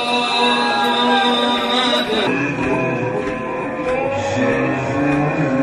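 At 2.27 s the audio drops into a section at the wrong speed that runs to the end: from that point it plays at 0.675 times its proper rate, so everything is slower and about seven semitones lower, likely from being resampled or clocked at the wrong rate. On a spectrogram every harmonic band steps down abruptly at 2.27 s and its features stretch along the time axis; the waveform shows the same events drawn out over longer spans.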